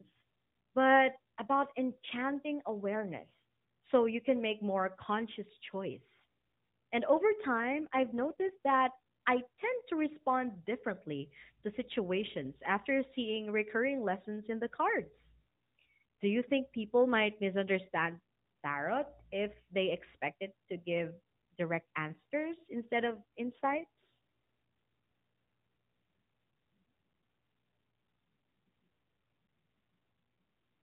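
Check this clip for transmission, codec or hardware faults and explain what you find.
Two brief codec faults stand out over narrowband mobile speech that passes nothing above 4 kHz. An AMR rate drop occurs from 7.58 to 8.58 s and again from 23.04 to 24.03 s. The link forces the codec to spend fewer bits on the speech, which fits a step from 12.2 to 5.9 kbps. The speech turns rougher and more synthetic, with no gap or band change.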